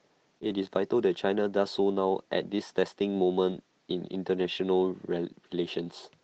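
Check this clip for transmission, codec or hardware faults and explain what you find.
Two kinds of transmission fault affect this speech clip, both from packets that failed to arrive, heard over an Opus call path whose sound is limited to about 8 kHz.

Short concealed packet loss, 0.39 to 0.48 s: about 20 ms of audio missed the decoder's deadline. The receiver covered roughly 15 ms by extending the preceding sound, carrying its pitch forward where it was voiced and using shaped noise where it was not, then crossfaded back into real audio. This stretches the timing by around a hundredth of a second and leaves a brief smear or wobble in place of the true sound.

Lost packet rebuilt from error correction, 0.43 to 0.54 s, 3.46 to 3.52 s, and 4.42 to 4.44 s: packets were dropped, but each following packet carried a coarse low-bitrate copy through Opus in-band forward error correction, and the decoder played that copy. 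No gap is heard. Instead, about 60 ms, 40 ms and 20 ms of speech come out grainier and noisier than the surrounding frames, which fits losses of four, two and one packet.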